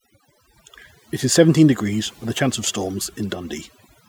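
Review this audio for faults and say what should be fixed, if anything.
Overdone noise removal runs through the whole speech clip. The noise reduction is set far too aggressively, so any frequency band sitting close to its noise estimate gets pulled down hard or gated out entirely. That takes the quieter parts of the voice along with the noise. You get a lowered background full of little twinkling specks. To avoid it, back the reduction amount off and let a bit of the noise floor stay.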